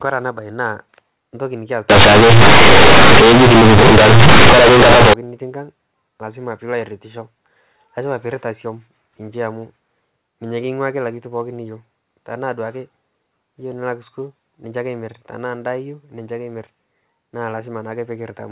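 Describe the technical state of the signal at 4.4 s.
At 4.4 s you're inside the companded-audio-read-as-linear stretch, 1.90 to 5.13 s: mu-law bytes get played as raw 8-bit samples without expansion, so it's harsh, buzzy and loud.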